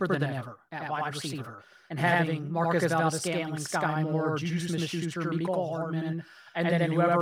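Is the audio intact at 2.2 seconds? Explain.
No. At 2.2 seconds, as throughout the clip, the speech is doubled: a second copy follows at equal level about 85 ms later, heard as a slap echo. This is channel delay (doubling). One channel runs late, which fits a 4096-sample buffer, and both channels are summed to mono.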